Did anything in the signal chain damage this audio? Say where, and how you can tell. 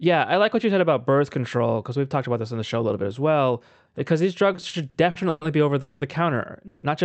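Yes, at the network and jitter buffer stage. Repeated stalls (stutter) run from 4.53 to 5.43 s, before "be over". There are seven gaps up to 120 ms where the buffer drained and smeared the last sound.

Two call audio freezes follow, at 5.81 s right after "be over" and at 6.67 s. The sound holds and fades for about 200 and 160 ms, likely from delayed packets. Then it resumes without loss.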